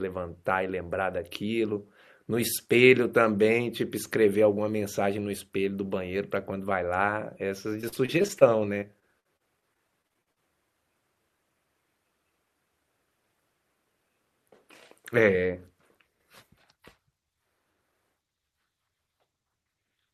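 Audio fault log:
7.81–8.50 s, repeated packet loss (robotic sound): choppy speech as several short holes, the longest 34 ms, are patched by stretching the preceding sound, covering about 22% of the stretch.
8.80–10.38 s, repeated packet loss (robotic sound): about a dozen dropouts up to 51 ms leave speech choppy and broken, each gap filled by repeating the last sound, about 18% concealed.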